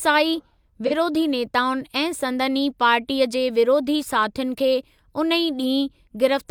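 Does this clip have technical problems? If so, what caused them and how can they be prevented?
Yes. From 0.86 to 0.93 s there is AAC frame loss with concealment. Roughly 43 ms of audio, consistent with one lost frame, was rebuilt from the previous spectrum, giving a brief smeared, phasey patch that appears on a spectrogram as a blurred, flattened block. Sending the stream with error protection or retransmission prevents it.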